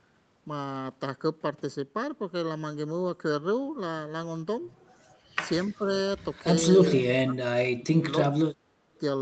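From start to end, the speech sounds hollow and phasey, with fixed spectral holes. This is channel delay (comb filtering): one channel runs under a millisecond behind the other, so their mono sum cancels at evenly spaced frequencies, the first near 700 Hz, across a band that stops at 8 kHz.

At 5.7 to 5.89 s the level sags by about 10 dB. Then at 6.79 to 7.36 s and 7.52 to 8.12 s the speech drops by about 30 dB. The likely cause is speech suppressed in double talk: an echo canceller, hearing both sides at once, turned this talker down along with the echo.

At 8.95 s a faint, brief scrap of delayed speech appears, about 40 dB below the voice and trailing it by 296 ms. This is likely echo leak, where loudspeaker sound reached the far microphone and survived echo cancellation.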